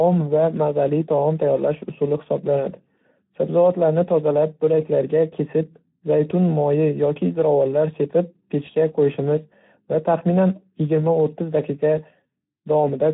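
From start to finish the speech carries Speex codec damage, plainly audible as a hoarse, noisy grain. The CELP coder has too few bits for the excitation, consistent with roughly 11 kbps, and nothing remains above 3.9 kHz, leaving a narrowband, muffled top.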